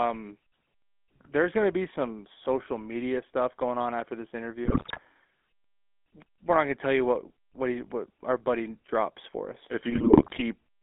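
From start to finish the speech has a buzzy, gravelly roughness inside a narrow band of about 250 Hz to 3.4 kHz, which fits the 13 kbps GSM full-rate codec. It models the vocal tract and excites it with sparse, regularly spaced pulses, discarding much fine detail.

From 4.64 to 5.00 s and again from 9.9 to 10.42 s the sound breaks into squawks, pops and gargling. These are GSM bit errors: corrupted filter, pitch and gain values distort the spectrum and level frame by frame.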